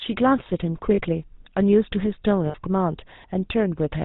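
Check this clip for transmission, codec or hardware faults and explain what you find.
Two faults are present: GSM full-rate coding across the whole clip, and two brief dropouts of lost GSM frames.

GSM full-rate codec, throughout: at 13 kbps the codec models the vocal tract and drives it with a sparse, regularly spaced pulse excitation, discarding everything above 4 kHz. The speech is band-limited and carries a plainly audible buzzy, gravelly roughness.

Lost GSM frames, at 0.94–1.02 s (40 ms, which fits two frames) and 2.46–2.55 s (80 ms, which fits four frames): the decoder reused the last good frame's settings. Each gap becomes a rough, metallic ring, and the second one is longer.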